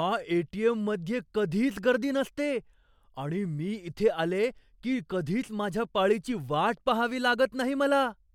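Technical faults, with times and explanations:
No technical faults can be heard in this speech recording. There is nothing to mark with a time or to explain.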